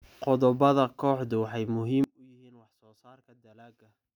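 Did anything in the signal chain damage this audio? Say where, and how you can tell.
Yes. A polarity flip on one stereo channel, one channel inverted, likely a miswired analogue lead, strikes at 2.04 s and lasts to the end. Summed to mono, the shared centre cancels, so the speech collapses by about 29 dB into a faint residue.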